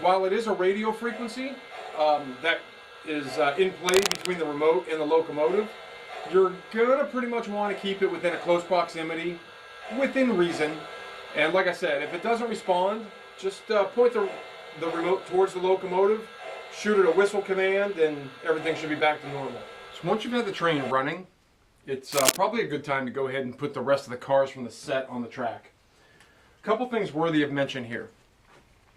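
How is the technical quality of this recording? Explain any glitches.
The recording has two short bursts of scratchy noise. Cable scratch noise at 3.89–4.28 s and 22.12–22.37 s is likely a worn cable or connector shifting, rapidly changing contact resistance. It adds harsh rustling, slightly quieter than the sound at first and about as loud the second time.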